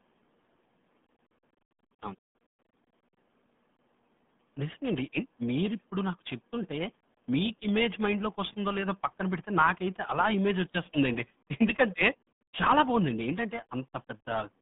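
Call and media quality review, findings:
RealAudio 14.4 codec, whole clip: speech muffled and gargly, band roughly 150 Hz to 3.5 kHz, nothing above 3.7 kHz. Heavy coding warble, which fits an 8 kbit/s dial-up codec. That gargle separates it from a clean telephone-band filter.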